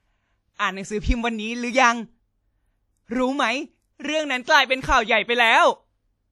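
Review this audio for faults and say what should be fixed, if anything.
The speech rings and sounds washy throughout, with hiss breathing alongside it. This is likely WMA compression smearing quantisation noise, and fits a bitrate near 48 kbps. Re-encode from the original source at a higher bitrate or in a lossless format.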